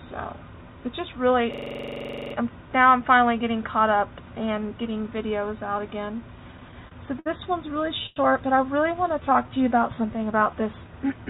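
From 1.54 to 2.35 s, a system hang loop occurs: the machine or its audio driver froze while the sound hardware kept replaying its ring buffer. A 42.67 ms slice, which fits a 2048-sample buffer, repeats 19 times at 23.4 Hz, producing a rapid machine-gun stutter.

Two bursts of repeated stalls (stutter) follow, where packets arrived late and the jitter buffer kept running dry. Between 6.57 and 7.28 s, five gaps are bridged with 124 ms of continued sound, the longest 62 ms. From 7.82 to 8.18 s, four gaps are bridged with 119 ms, the longest 98 ms, about a third of that stretch. Nothing drops out, but the audio drags and hiccups, with faded fill in the longer waits.

From 8.91 to 10.52 s, a jitter buffer slow-down builds up reserve by repeating single pitch periods and pause fragments. This adds 172 ms and plays the passage at 90% speed with unchanged pitch, so sounds stretch out. Throughout, the G.711 mu-law call path leaves nothing above 4 kHz.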